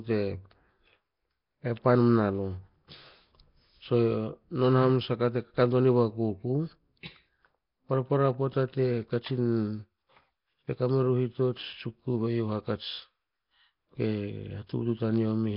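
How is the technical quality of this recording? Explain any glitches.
Technical quality is poor: the speech is heavily degraded throughout by what is likely Nellymoser compression. From start to finish it sounds rough and hissy, with a smeared, underwater character. The codec spends a fixed two bits per sample on short blocks, consistent with roughly 22 kbps, so weak bands are replaced by noise. A spectrogram shows nothing above 5.3 kHz, with blocky, noise-filled patches between the harmonics.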